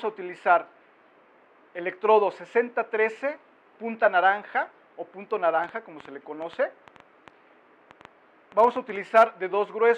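A train of clicks runs from 5.64 to 8.97 s: about twenty sharp pulses at an average of 5.4 per second, spaced unevenly rather than in a steady tick. Each click has much the same shape and reaches roughly the level of the surrounding sound, so the popping is heard over the sound, pauses included. The cause is likely interference from nearby equipment or a faulty connection or power supply injecting brief pulses into the signal path.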